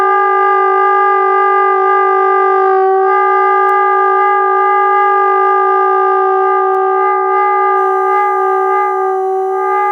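At 3.69 s and again at 6.75 s there is a bit error spike: a flipped bit throws the sample value by a power of two and it snaps straight back, over three samples then one. Each is a single sharp, broadband tick peaking near -18 dBFS, unrelated to the surrounding sound.

From 7.77 s to the end, USB whine sits under the audio as a steady 1 kHz tone. The bus's 1 ms frame activity is leaking in through power or ground, leaving a thin fixed-pitch whistle roughly 35 dB below the main sound.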